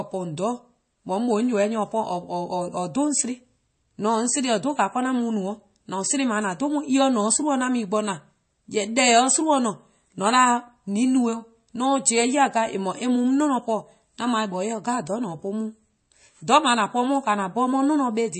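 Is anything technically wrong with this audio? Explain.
Yes. Throughout the speech, the audio was likely passed through MP3 compression starved of bits, which fits a low rate of around 32 kbps. With too few bits, the encoder discards the treble outright, leaving nothing above about 8.3 kHz, and drops weaker frequency lines that then flicker in and out between frames. The result is plainly audible: a dull, band-limited tone with a watery, swirling texture, metallic chirping on s sounds, and smeared consonant attacks.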